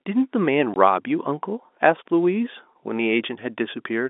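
From 0.74 to 0.76 s the speech drops to a 20 ms hole of packet loss filled with silence. The gap fits one lost packet, and the receiver played nothing in its place. The hole sits inside a telephone band of about 250 Hz to 3.6 kHz from the G.711 coding.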